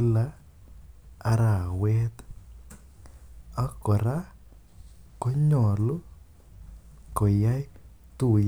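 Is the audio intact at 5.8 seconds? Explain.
Yes, the speech at 5.8 seconds is intact, with no dropout, glitch or other fault audible at that moment.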